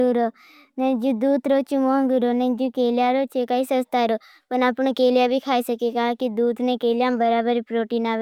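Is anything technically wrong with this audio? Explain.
No, nothing in this speech recording stood out as a technical problem on listening.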